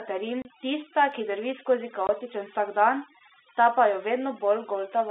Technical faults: overdone noise removal; packet loss filled with silence

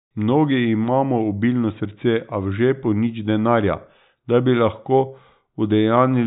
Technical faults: none

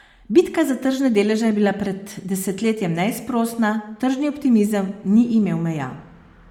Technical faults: Bluetooth LC3 compression

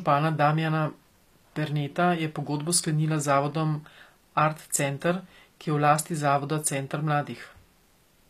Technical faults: HE-AAC compression

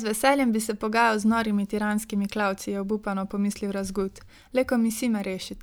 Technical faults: none

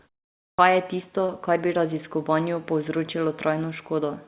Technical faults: clipped start after a pause; short concealed packet loss

